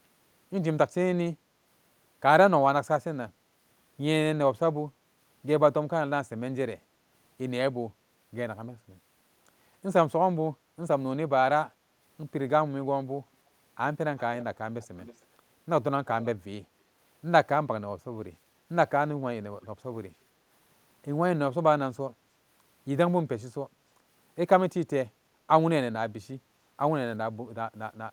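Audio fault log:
14.17 to 19.67 s, echo leak: a faint delayed copy of the speech surfaces in short bursts at 14.17, 14.39, 14.82 to 15.22, 16.06 to 16.27 and 19.62 s, lagging by 317 ms (354 ms for the last burst). The copies sit roughly 20 dB below the speech (about 25 dB for the 14.82 to 15.22 s burst), and the last is much quieter. The likely cause is a far-end loudspeaker feeding the microphone with its echo canceller letting scraps through. Unlike room reverberation, this is a distinct repeat at a fixed lag that comes and goes rather than a smooth decaying tail.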